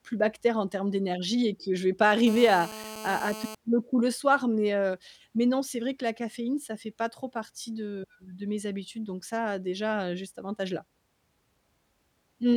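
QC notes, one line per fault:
2.27 to 3.55 s, GSM phone buzz: just after "que je vais pas", a hard, raspy buzz cuts in over the speech and stops before "le coup le soir". It sits about 13 dB below the speech. It repeats about 217 times a second and carries many harmonics. A nearby 2G phone on a call is sending radio bursts at that rate. The audio circuit rectifies them into a steady buzz unrelated to the speech.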